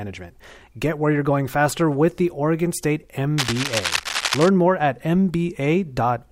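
From 3.38 to 4.49 s, before "more at", cable scratch noise rasps under the speech in uneven bursts, unlike hiss, likely from a worn connector shifting.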